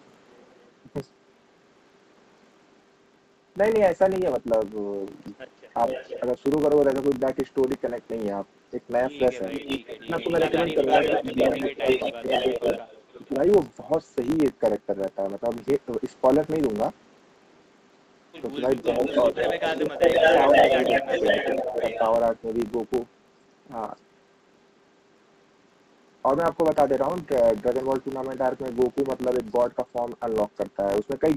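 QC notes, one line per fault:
Throughout, filter restarted on every block: a steady 50 Hz buzz that rises and falls with the speech level. That fits 20 ms blocks, each restarting the filter from silence. It is a regular tick pattern, not mains hum, which would stay the same however loud the speech is.
5.87–6.2 s, 9.52–13.27 s and 18.82–22.16 s, echo leak: a delayed copy of the speech sits under the original, lagging by about 464, 474 and 491 ms. It starts at roughly 10 dB down, reaches about 5 dB down, then matches the speech's level. This is likely far-end loudspeaker sound getting past the echo canceller. A fixed, nearly half-second lag like this sets it apart from room reverberation.
9.96–12.75 s, 13.28–13.34 s and 18.86–22.01 s, speech suppressed in double talk: the talker's speech dips by up to roughly 20, 10 and 15 dB while the far side is playing, for around a second in total in each longer stretch and a brief 70 ms in the short one. 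This is likely the canceller turning down both signals during overlap. Because the gaps follow the overlaps and not the network, they differ from packet-loss dropouts.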